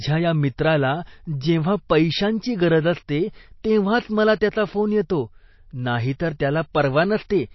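MP3 compression throughout the speech: nothing above 5.8 kHz and plainly audible watery swirl, likely from an encoder starved of bits, consistent with roughly 27 kbps.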